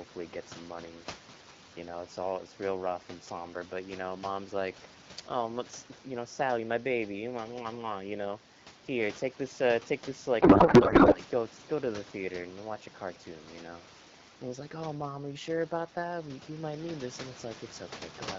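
A codec payload misread hits this speech recording from 10.41 to 11.20 s: the receiving side unpacks AMR-WB frames in bandwidth-efficient layout while they were sent octet-aligned, so every field lands a few bits off. The decoder still accepts the frames, and the speech turns into garbled, warbling noise that barely tracks the talker. Around it, the coding sounds light, fitting roughly 12.65 kbit/s HD Voice, with room noise about 17 dB below the speech.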